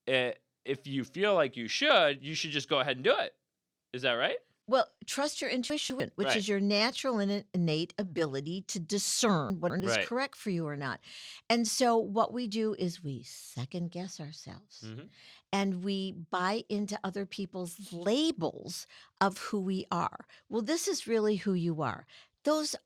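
Chunks out of order hit twice, 5.7–6.0 s after "trust your" and 9.5–9.8 s before "is right correct for": a 100 ms chunk plays two chunks late, leaving a jumbled moment.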